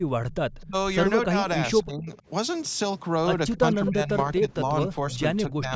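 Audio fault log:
0.32–0.67 s, 3.53–3.90 s and 5.12–5.16 s, echo leak: a copy of the speech trails the original by about a quarter second (253 ms), sitting roughly 25 dB under the talker in the first and last spots but rising to only about 10 dB under at 3.53–3.90 s. This is likely a far-end loudspeaker whose echo canceller let part of the microphone pickup slip through and returned it down the line.
0.63–0.75 s, 1.26–1.45 s, 1.84–2.09 s, 3.55–5.11 s and 5.47–5.73 s, speech suppressed in double talk: the talker's level sags in short bites while the returning sound overlaps it. The deepest cut, about 35 dB, comes near 0.7 s. Later drops are around 15 to 20 dB. The long stretch from 3.55 s has roughly 0.7 s of dips spread through it. The likely cause is an echo canceller that could not tell the talker from the loudspeaker echo during simultaneous sound and turned both down.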